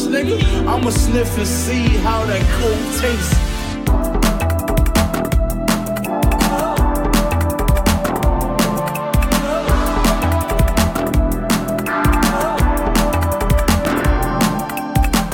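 Loud pops at 0.83 to 0.85 s and 13.85 to 13.87 s: single sharp pulses, about 10 dB and then about 15 dB above the audio, which carries on underneath. Each is likely a brief voltage step from a switch, static or driver glitch.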